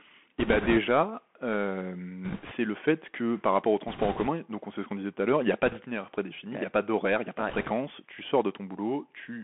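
Bluetooth CVSD headset codec runs through the whole speech clip, and its damage is plainly audible. The sound is squeezed into a telephone band of roughly 200 Hz to 3.4 kHz, which fits a 64 kbit/s CVSD stream where each sample is a single up-or-down step of adaptive size. Loud, bright passages outrun that step and turn harsh, sibilants come out scratchy, and a fine granular hiss sits under everything.

Bit errors on a Bluetooth voice link appear in five short bursts at 0.40–0.79 s, 2.25–2.53 s, 3.88–4.28 s (after "que par rapport au", before "donc on sait ce"), 5.66–5.79 s (after "l'heure il n'y a", before "prédéfini il n'y a"), and 7.49–7.71 s (after "n'y a pas de", before "tu sors"). Because every CVSD bit carries the same small weight and a wrong step fades quickly, the flipped bits produce no sharp clicks. Instead, each burst brings a rushing, crackly noise. That noise is strongest in the first burst and in the one near 4 s, where the error rate is a few percent.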